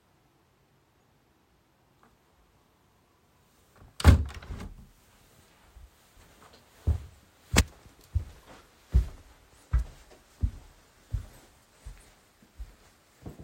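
No technical faults can be heard anywhere in the recording of sounds.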